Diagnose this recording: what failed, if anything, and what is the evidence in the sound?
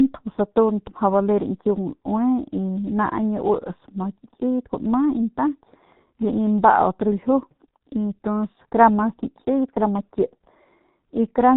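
Muffled, hoarse speech with smeared consonants and nothing above 4 kHz throughout points to heavy G.723.1 codec damage, fitting about 6 kbit/s with slow 30 ms frame updates.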